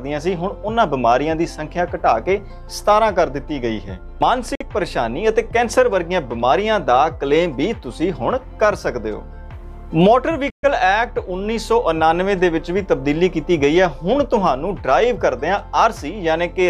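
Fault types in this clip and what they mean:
Bluetooth stall: sound cuts to brief silence twice, 52 and 130 ms, likely the headphone buffer running dry while lost packets were resent.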